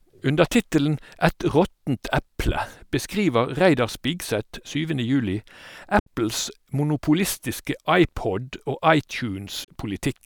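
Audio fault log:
5.99–6.07 s and 9.64–9.69 s, digital broadcast dropout: speech snaps to silence over about 8 ms, then resumes. The first gap fits two lost 32 ms frames and the second fits one. The receiver mutes corrupt or missing frames, so that speech is gone.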